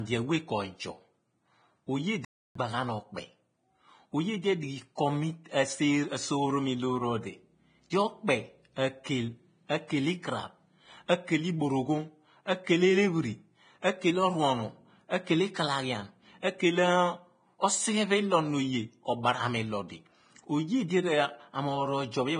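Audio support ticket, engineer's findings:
Heavy codec damage throughout: hissy, grainy treble, roughened tones, smeared attacks. Likely Vorbis compression, consistent with a low bitrate near 23 kbps quantising the residue coarsely.

Playback stall at 2.25–2.55 s: speech drops to silence for about 305 ms mid-flow, then resumes. Player likely starved of data or its thread blocked.

Pre-echo at 7.9 s: short hiss, roughly 20 ms, ahead of a sharp onset, softening the attack. Transform-block quantisation noise spread before the transient.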